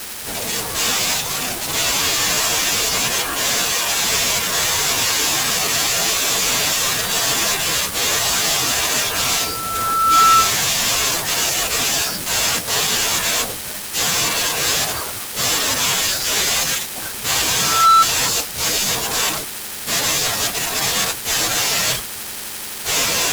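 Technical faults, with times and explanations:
9.18 to 10.60 s and 17.58 to 18.06 s, loudspeaker feedback squeal: a single 1.3 kHz tone swells up over about a second the first time and a fraction of a second the second time, reaching about 10 dB above the speech. The microphone is re-amplifying the loudspeaker at that frequency, and the gradual build-up from nothing sets it apart from a steady whine or an inserted test tone.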